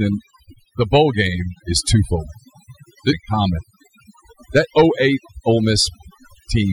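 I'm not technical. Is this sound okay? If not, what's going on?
No. A noise reduction tool was set far too strong, which is overdone noise removal. It shuts off any slice of the sound resembling background hiss, so the background throughout drops into near-silent gaps sprinkled with twinkling specks.

At 3.11 s the speech jumps suddenly forward with a small blip, as if a piece went missing. This is likely a stream segment skipped: one chunk of the stream failed to arrive and playback simply carried on from the next one.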